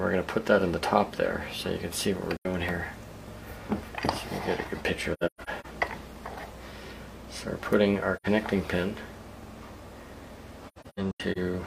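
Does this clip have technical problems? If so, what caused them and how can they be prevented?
Yes. The clip has AAC frame loss with muting. Short holes of about 85 ms occur at 2.36–2.46 s and 8.16–8.26 s, which fits two lost frames each. Clusters of dropouts are scattered across 5.13–5.66 s and 10.68–11.38 s, with the longest gaps lasting roughly 150 ms and 100 ms. The decoder zeroed the missing spectra, and the overlapping windows fade the audio out and back in, so the holes sound soft-edged. On a spectrogram they appear as blank full-band columns with blurred edges. The waveform tapers smoothly to flat silence. Forward error correction, retransmission, or a larger jitter buffer on the transport would prevent this.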